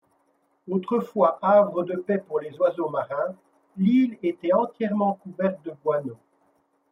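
From 0.10 s to the end at 6.92 s, clock slip clicks run through the speech as faint, evenly spaced ticks, about ten a second and around seventy in all. Each is a single dropped or repeated sample, likely from two unsynchronised clocks differing by a couple of hundred parts per million. Their strict regularity sets them apart from random crackle or dropouts.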